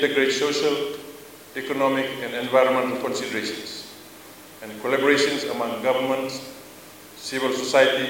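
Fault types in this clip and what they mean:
Nothing to flag here; the sound comes through without any audible technical faults.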